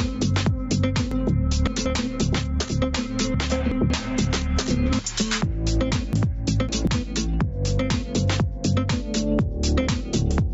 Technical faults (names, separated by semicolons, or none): gain pumping; chunks out of order